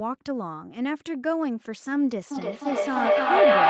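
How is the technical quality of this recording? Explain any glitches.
The big problem is a feedback howl that kicks in at 2.31 s and runs right to the end. A mic and speaker on the same call are feeding each other, gaining level each trip, so a tone around 700 Hz builds to about 11 dB over the speech, with the loop repeating roughly every 0.3 s.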